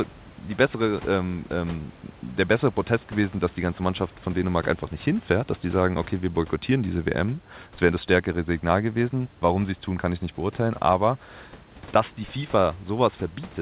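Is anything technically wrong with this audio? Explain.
No, nothing in this speech clip points to a technical fault. It has the narrowband sound of a telephone-grade call path, with nothing above 4 kHz, which fits G.711 mu-law coding, and the room's background noise sits about 27 dB below the speech.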